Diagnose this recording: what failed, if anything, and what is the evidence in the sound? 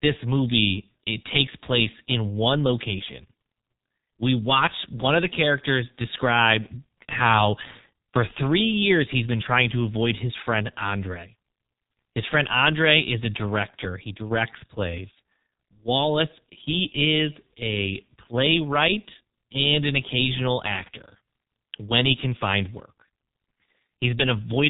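G.723.1 codec damage, present throughout the speech at the codec stage. Nothing reaches above 3.8 kHz, and heavy damage leaves the voice muffled and hoarse with smeared consonants, which fits a bitrate near 6.3 kbit/s, where a slowly updated voice model cannot track rapid articulation.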